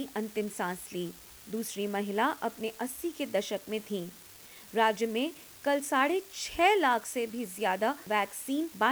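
From the start of the clip to its end there is an unreliable data bit. One data line is marginal, so its bit comes out wrong in a random fraction of samples. Each wrong sample jumps by the same fixed step of about -39 dBFS, which produces a steady crackle or fizz across the whole clip. It does not follow the level of the audio and stays audible in the pauses, where nothing else masks it.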